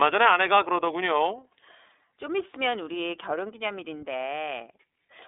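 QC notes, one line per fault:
Throughout, iLBC codec: the speech is confined to a telephone band of roughly 300 Hz to 3.6 kHz, with nothing above 3.8 kHz, and carries a plainly audible rough, slightly synthetic texture. Each 30 ms block's excitation is coded independently of the previous one, which fits the mode near 13.33 kbps. Unlike a clean G.711 phone line, which is band-limited but smooth, this adds a granular buzz from the model-based coding.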